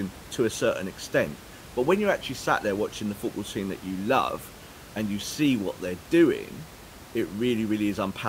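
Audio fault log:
No faults detected; room noise sits about 19 dB below the speech and belongs to the recording, not the system.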